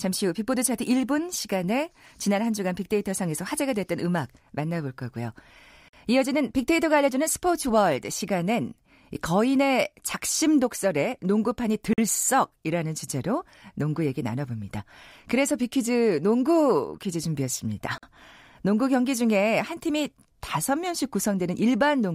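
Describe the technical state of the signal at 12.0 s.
A gap between chunks sits from 11.93 to 11.98 s, just before 12.0 s: the speech was delivered in 6-second pieces, and about 48 ms of silence opens at this join, so the sound breaks into a short hole.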